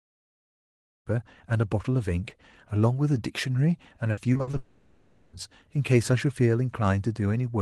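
From 4.11 to 4.55 s there's repeated packet loss: five short gaps, the longest 60 ms, each patched over, so the speech turns choppy with pieces missing.

Right after, from 4.57 to 5.35 s, the sound smears into a stretched, fading buzz for about 0.78 s, most likely a long network dropout where nothing arrived.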